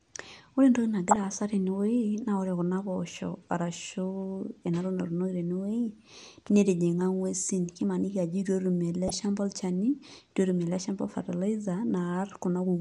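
Throughout, the speech sounds dull and granular, with gurgling in the upper range, likely MP2 compression at a rate near 80 kbps that leaves too few bits for the higher sub-bands. From 1.09 to 1.20 s, and again from 9.08 to 9.22 s between "ajo itu etum ele" and "olchani itu", DAB burbling adds short blips of noise in single sub-bands as bit errors get past the error correction for a handful of frames.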